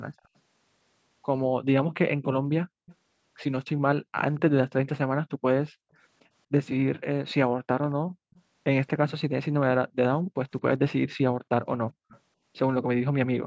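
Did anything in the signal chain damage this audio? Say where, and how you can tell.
Yes, echo leak at the call processing stage: a faint copy trails the speech by 227 ms at 0.18–0.28, 2.86–5.7, 7.28–9.12 and 11.91–12.2 s, likely loudspeaker pickup the canceller missed.

Background gated by the echo canceller too: the room sound drops about 40 dB for a fraction of a second within 5.36–5.97 s and 10.23–11.5 s, as the microphone gets clamped.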